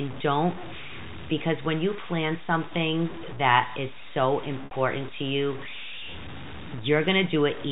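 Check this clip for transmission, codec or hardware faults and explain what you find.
Two faults are present: a coarse, undithered quantisation across the whole clip, and one concealed packet loss.

Low bit depth without dither runs from start to finish. The speech has a gritty, granular distortion whose roughness rises and falls with the voice, and the error sits only around 15 dB below the signal. The likely cause is rounding down to very few levels, which fits about 6 bits, with no dither to break up the error. Because the error tracks the signal rather than forming a steady floor, it is unlike ordinary hiss or background noise. It also differs from the telephone coding on this path. That G.711 mu-law stage adds at most a faint noise, and the roughness heard here is far coarser than anything it produces.

Packet loss with pitch repetition occurs from 4.65 to 4.71 s, right after "something that is so" and before "to you". 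Roughly 60 ms of audio is missing, which fits two lost packets. The receiver filled the hole by repeating the last pitch cycle and letting it fade. The result is a held, buzzy tone where speech should continue, then a cross-fade back into the voice. A plain dropout would go silent instead, and a repeated stretch of speech would carry changing sounds rather than one sustained cycle.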